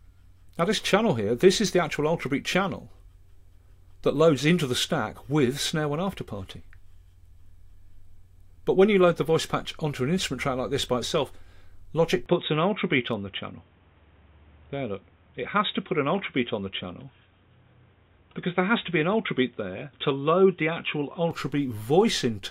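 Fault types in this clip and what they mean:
Input switched to a poorer device: at 12.26 s the sound abruptly turns duller and boxier, with nothing above 3.8 kHz, and stays that way until 21.31 s, when the full band returns. There is no gap at either change and the level holds roughly steady, but a faint new background noise appears, about 40 dB below the signal. That fresh noise and changed tone, not just lost treble, mark a likely device change rather than a simple low-pass filter.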